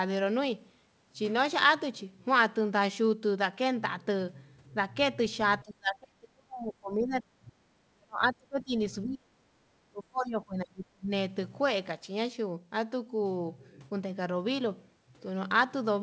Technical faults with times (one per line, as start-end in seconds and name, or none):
5.63-7.53 speech suppressed in double talk
7.82-8.74 speech suppressed in double talk
9.03-9.52 speech suppressed in double talk
9.80-11.11 speech suppressed in double talk